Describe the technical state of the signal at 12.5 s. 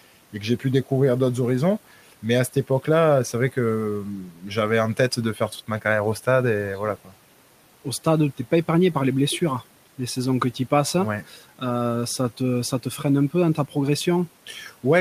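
At 12.5 s the speech is intact, with only the room's own background noise sitting about 24 dB beneath it.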